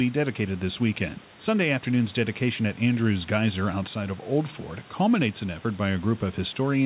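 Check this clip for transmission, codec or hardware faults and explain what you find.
No transmission, codec or hardware faults can be heard in this speech clip. Room noise sits about 27 dB below the speech, and the band stops at 4 kHz, which fits a narrowband call path such as G.711 mu-law at 64 kbps.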